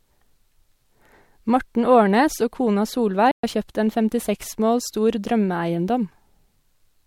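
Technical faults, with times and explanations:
3.31–3.44 s, playback stall: after "og kona" the speech falls completely silent for 120 ms before "har kjøpt en", likely because the player ran short of data.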